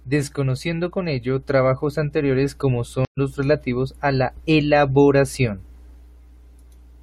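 A speech clip whose stream connection dropped at 3.05 s, forcing the player to reconnect and restart its decoder mid-stream: after "ello trabajos anteriores como" the sound goes silent for 120 ms, then resumes at "los relativos a la" about a tenth of a second further on, so a short stretch of the live stream is simply skipped.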